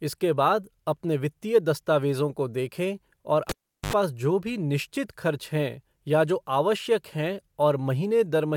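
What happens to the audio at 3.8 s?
At 3.8 s the cable was pulled and plugged in, spanning 3.49 to 3.93 s. A pop starts roughly 390 ms of near silence. While only the tip touches, there is 73 ms of 50 Hz mains buzz. Another pop restores the speech.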